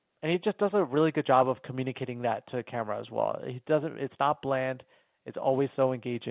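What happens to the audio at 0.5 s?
Nothing goes wrong at 0.5 s: the speech continues intact through that moment, carried over the G.711 A-law telephone coding with its usual 4 kHz ceiling and no fault of any kind.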